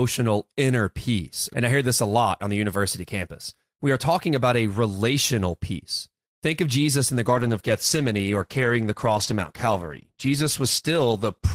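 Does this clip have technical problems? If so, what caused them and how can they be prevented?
Yes. A call bitrate drop starts at 7.23 s, right after "in the", and lasts to the end of the clip at about 11.5 s, roughly 4.3 s. The speech turns coarse and muffled as the encoder, following a lower bandwidth estimate, codes with far fewer bits and loses high-frequency detail. The change in quality fits a fall from about 32 kbps to about 13 kbps. To prevent it, give the call a stable link with bandwidth headroom and set a higher minimum encoder bitrate.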